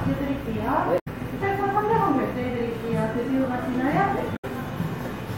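Damaged data in a compressed stream breaks the audio twice, from 0.96 to 1.08 s and from 4.33 to 4.45 s. Each time, bytes in the encoded stream are corrupted, so the decoder misreads the affected frames and loses sync until it finds a valid frame header again. What comes out is a short glitch of about 0.12 s that replaces the sound at each point.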